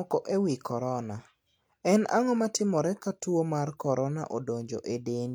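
No technical faults can be heard anywhere in the recording, which holds together as a single continuous signal with nothing breaking into it.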